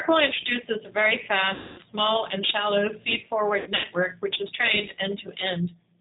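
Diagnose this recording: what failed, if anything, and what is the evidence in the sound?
The codec stage is the culprit throughout: this is G.729 coding, and the damage is plainly audible. Nothing above 4 kHz survives, and the speech has that rough, slightly synthetic edge of a pulse-excited model, which points to 8 kbit/s G.729A.

At the network stage there's VoIP packet loss concealed by the speech codec, twice. From 1.54 to 1.82 s a 240 ms gap gets bridged by the decoder stretching its last pitch and filter into a sound that fades, consistent with about eight lost packets. From 3.60 to 3.86 s, 150 ms goes missing in scattered bits, with a longest run of 90 ms, so the sound fades and recovers unevenly.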